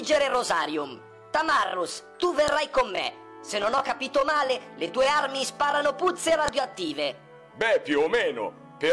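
File header played as audio: sharp, loud clicks at 2.48 s and 6.48 s, exactly 4.0 s apart, where separately encoded pieces of the audio were joined with their WAV headers left in, so those header bytes play back as a brief burst of samples.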